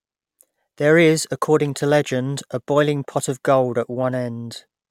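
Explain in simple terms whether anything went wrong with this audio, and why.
Nothing went wrong with this speech recording: the signal comes through intact, with no technical faults to point to at any moment.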